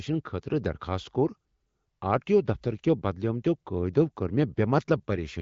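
No technical faults are present in this speech recording; it carries the light coloration of the AMR wideband (HD Voice) codec, with nothing above roughly 7.5 kHz and the clear, unrasped character that points to one of the higher AMR-WB rates, around 15.85 kbit/s.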